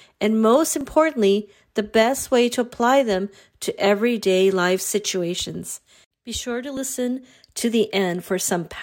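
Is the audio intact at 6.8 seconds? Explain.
No. At 6.77 s a tiny piece of the speech, around 15 ms, is missing, heard as a brief skip where the two sides butt together with no silent gap, unlike a dropout. It is likely audio missing between chunks, lost at a 2-second block boundary.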